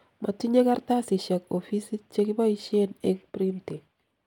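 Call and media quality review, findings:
No faults heard in this speech.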